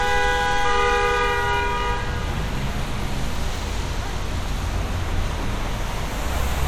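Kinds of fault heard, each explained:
Nothing in this recording stood out as a problem on listening.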